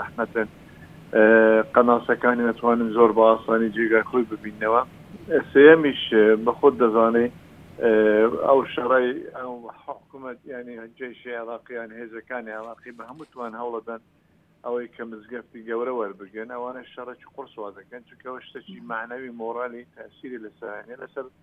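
Nothing in the audio points to a technical problem. Where the level rises or falls, it moves gradually, the way a fader would, with no sudden jumps.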